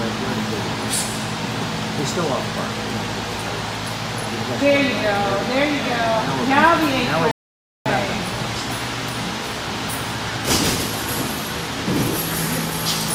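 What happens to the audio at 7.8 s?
At 7.8 s the sound is in a rebuffering stall, silent from 7.31 to 7.86 s while the player waits for more data, then resuming exactly where it stopped, adding 0.54 s. On a waveform it shows as a flat line; on a spectrogram, a blank vertical band.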